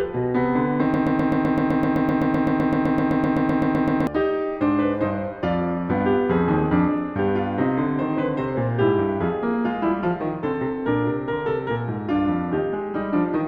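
The player or stream likely stalled from 0.94 to 4.07 s and kept resending its last fragment, a broken-record loop: a 0.13 s slice of the music repeats exactly, back to back, about 25 times, and the music that should have played there is lost.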